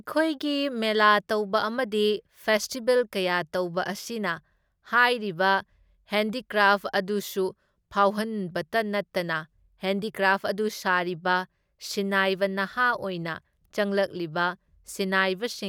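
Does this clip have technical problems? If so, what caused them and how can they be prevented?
No, there are no technical problems in this recording.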